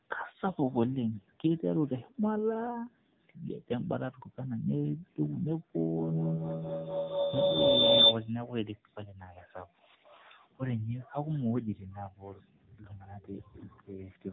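Throughout, the speech sounds buzzy, thin and synthetic, with nothing above about 3.9 kHz. This is the AMR narrowband mobile codec: the voice is rebuilt from a vocal-tract model and sparse pulses, and the plainly audible damage points to a low bitrate of roughly 8 kbps.

From 5.79 to 8.39 s, a piercing tone around 4 kHz swells to about 10 dB above the speech, with the loop repeating roughly every 200 ms. This is feedback howl: two devices in the same room are on the call, and the microphone-to-loudspeaker loop gains level on each pass.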